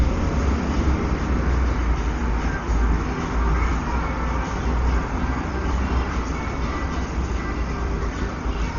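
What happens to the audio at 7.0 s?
At 7.0 s the sound carries the same damage it has from start to finish, likely Dolby Digital compression at a very low rate, around 32 kbps. Nothing survives above 7 kHz, so it sounds dull, and the encoder has starved many frequency lines of bits. Dither fills those gaps with rough, fluttering noise around tones. A spectrogram shows a hard ceiling at 7 kHz and speckled, blocky noise between the partials.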